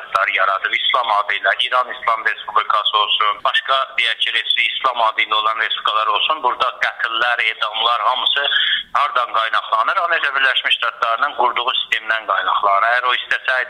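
No technical faults can be heard anywhere in the clip. Nothing cuts out, jumps or breaks up at any point.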